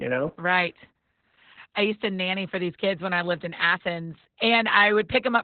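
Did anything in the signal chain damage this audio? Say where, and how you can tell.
Yes: the speech sounds muffled and hoarse throughout, with nothing above 4.4 kHz. That points to heavy Opus voice compression at the codec stage, in narrowband SILK mode at roughly 8 kbps.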